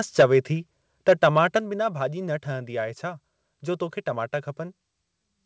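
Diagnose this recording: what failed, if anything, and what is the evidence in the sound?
Microphone overload at 0.19 to 0.24 s and again at 1.08 to 1.39 s: the loudest speech peaks come out flattened and crackly, harsher in the first burst. The likely cause is input gain set too high ahead of the converter, driving peaks about 7 dB and about 5 dB past full scale. The converter shaves off their tops, cutting roughly a fifth of the samples in the short first event and only a few percent in the longer second one.

Microphone volume stepped down at 0.21 s and 1.59 s: the speech and the background both drop abruptly in level, by about 3 dB and then about 6 dB, with no fade. The first step lands inside the initial distorted burst, and the second follows shortly after the later clipped stretch. This pattern points to call processing that likely detected clipping and lowered the device's input volume in one step each time. 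The call codec's band limit, with nothing above 8 kHz, is present throughout.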